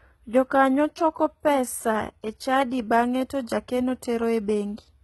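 Throughout the speech, the treble points to likely HE-AAC compression at a very low bitrate, around 16 kbps. Only the lower spectrum is coded, and the top is rebuilt from copied lower bands. Damage is heavy: s sounds turn gritty and metallic, and nothing survives above 11.8 kHz.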